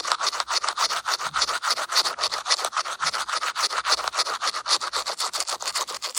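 Nothing goes wrong anywhere in this recording of sounds, so there's no fault to point to at any moment.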